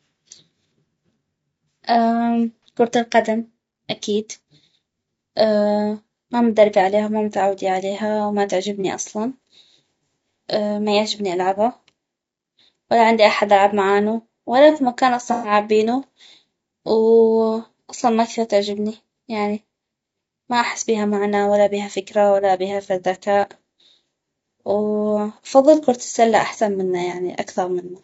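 Throughout the speech there is a rough, grainy texture with noise filling the gaps between pitch harmonics and a thin, synthetic top band, likely from low-delay AAC compression (AAC-ELD) at a rate that fits about 32 kbps. On a spectrogram, harmonics look blurred and the upper band appears patchy.

AAC frame loss with concealment occurs at 2.63 s, just before "كرة القدم اكيد", and at 8.81 s, after "وما متعودي عليها وما". Each is a 30 ms smeared, phasey blip that fits a single lost frame. At 15.32 to 15.52 s, after "معانو ولا اكو مكان", a longer gap dips in level and fades back. The spectrogram shows smeared or noisy columns, and the waveform shows a brief amplitude sag.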